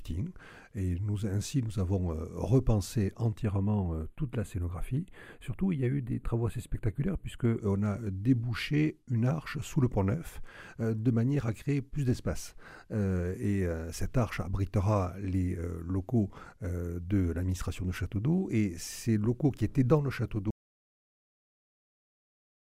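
The audio has two problems. From 3.42 to 7.60 s there's channel delay causing comb filtering: one channel lags the other by only a few samples, a small fraction of a millisecond, and when they're folded to mono the shared content cancels at evenly spaced frequencies. With a lag that short, the first notch sits up around 5 kHz, so the top end goes dull and a bit hollow and phasey until both channels line up again. Then at 20.51 s there's an audio dropout to silence that runs right to the end. The sound doesn't fade. It just stops dead, and what follows is silence with no room tone at all. That points to the input being lost, likely a device dropping out or a link failing, while the recorder kept writing silence, so whatever came after that point is gone.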